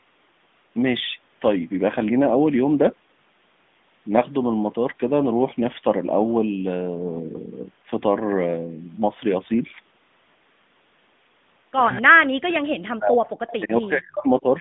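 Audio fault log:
Throughout, AMR narrowband mobile codec: everything sits in a line band of about 150 Hz to 3.6 kHz, so it's boxy and thin. The buzzy, synthetic edge on the sound fits the mode around 10.2 kbps. That's plainly audible codec damage from a vocal-tract model running on a limited bit budget.
0.68 to 0.70 s, lost AMR speech frame: one 20 ms frame dropped out. The decoder patched it by replaying the previous pitch and spectral settings at reduced gain, which is why you get that quick little dip and warble before things pick up again.
12.01 to 13.3 s and 13.6 to 14.46 s, speech suppressed in double talk: the level sinks in chunks, about 40 dB at its worst in the first stretch and about 35 dB in the second. The likely cause is the echo canceller getting confused with both ends talking at once and ducking the near talker along with the echo.
13.3 to 13.58 s, echo leak: a faint copy of the sound trails in about 240 ms late, roughly 20 dB below the main signal. 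Most likely a loudspeaker at the far end got into its mic, and the canceller didn't scrub all of it before it was sent back.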